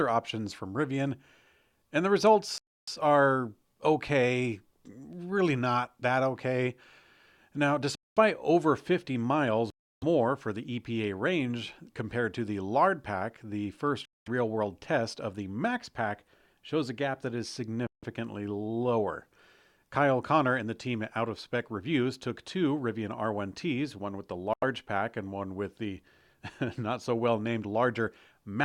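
Speech cuts to dead silence six times, at 2.58 s (after "and the", resuming on "are okay really not"), 7.95 s, 9.70 s, 14.05 s, 17.87 s (after "a gap that is") and 24.53 s (between "one with the" and "pack and one with"), for 0.09 to 0.32 s each. These are likely Bluetooth stalls: the headphone buffer ran empty while delayed packets were resent. Unlike a recording dropout or codec glitch, each gap is clean silence.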